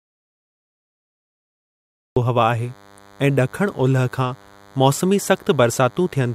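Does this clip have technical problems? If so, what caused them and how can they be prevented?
Yes. An audio dropout to silence runs from the start until 2.17 s: plain silence with no room tone, likely from a lost input or mute. Check connections and mutes before recording.

DECT cordless phone buzz runs from 2.58 s to the end: a thin 100 Hz buzz with harmonics, roughly 30 dB below the speech, from rectified radio bursts. Keep DECT handsets and bases away from the recording chain.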